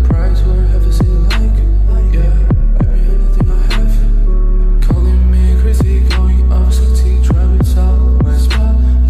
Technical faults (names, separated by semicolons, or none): none